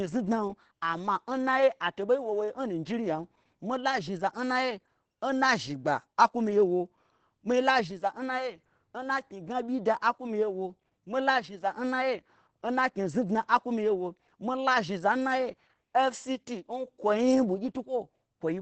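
From start to finish the speech carries heavy Opus voice compression. Nothing sounds above about 8.5 kHz. The coder's linear-prediction mode models the excitation coarsely. Voices turn muffled, hoarse and slightly robotic. That fits a wideband setting near 10 kbps.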